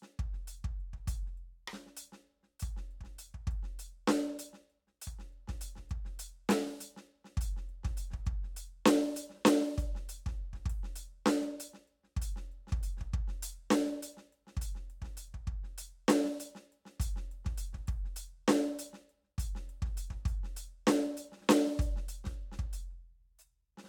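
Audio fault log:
The music signal holds steady and continuous throughout, with no dropouts, distortion or interruptions to its level or timing.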